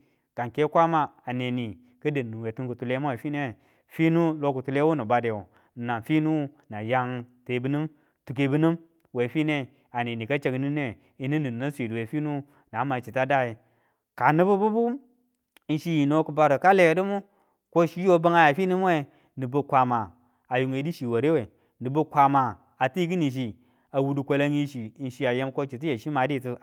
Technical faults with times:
none

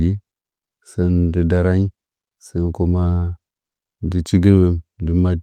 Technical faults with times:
none

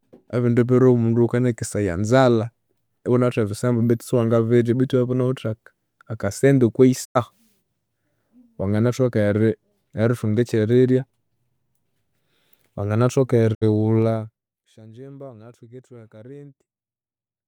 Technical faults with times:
7.03-7.17 digital broadcast dropout
13.53-13.63 digital broadcast dropout
13.98-14.64 zipper noise

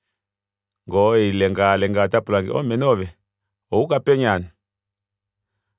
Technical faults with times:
none

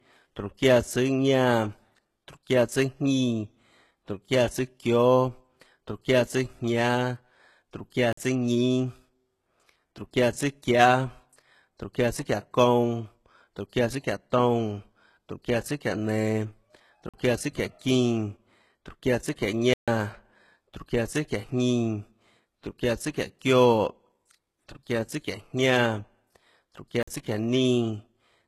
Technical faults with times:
0.00-28.47 HE-AAC compression
8.13-8.17 block of digital silence
17.09-17.14 block of digital silence
19.74-19.88 block of digital silence
27.03-27.07 block of digital silence

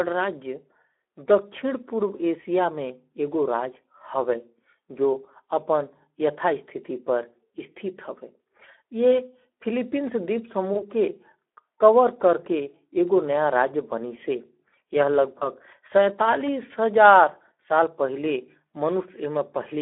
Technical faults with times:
0.00-19.81 Speex codec
10.73-10.84 VoIP packet loss concealed by the speech codec
15.39-15.47 VoIP packet loss concealed by the speech codec

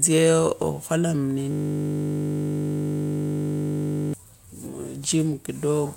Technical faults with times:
1.51-4.13 system hang loop

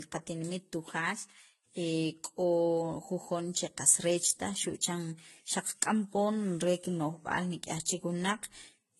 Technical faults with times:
0.00-8.99 transcoding between lossy codecs

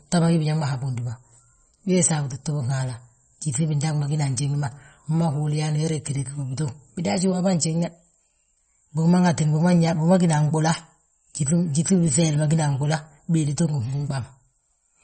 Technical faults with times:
0.00-15.04 MP3 compression

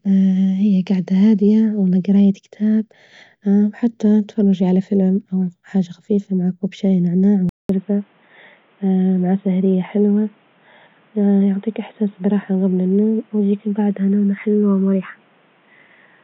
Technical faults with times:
7.49-16.24 input switched to a poorer device

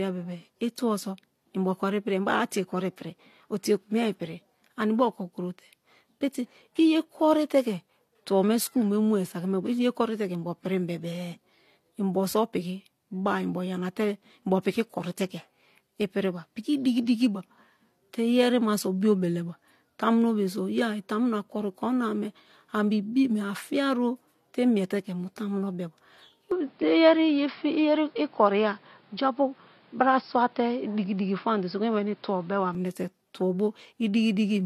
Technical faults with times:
0.00-34.66 transcoding between lossy codecs
26.51-32.75 input switched to a poorer device

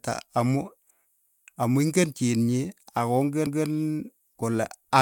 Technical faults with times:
1.27-1.47 overlapping chunks
3.47-3.67 overlapping chunks

